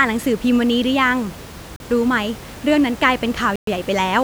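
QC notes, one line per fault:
1.76–1.80 s and 3.56–3.67 s, Bluetooth stall: the sound drops to silence for 39 ms, then 117 ms, and resumes, likely the headphone buffer running dry while delayed packets were resent.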